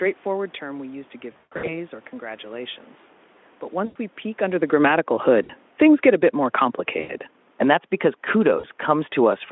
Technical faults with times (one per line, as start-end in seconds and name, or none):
1.31-1.77 VoIP packet loss concealed by the speech codec
3.74-6.24 automatic gain falling
3.85-3.96 VoIP packet loss concealed by the speech codec
5.43-5.52 VoIP packet loss concealed by the speech codec
6.99-7.13 VoIP packet loss concealed by the speech codec
7.47-9.42 automatic gain falling
8.59-8.65 VoIP packet loss concealed by the speech codec